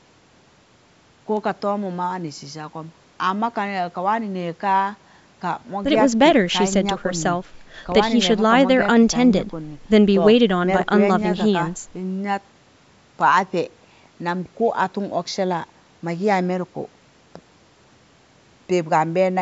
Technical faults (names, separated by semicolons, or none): none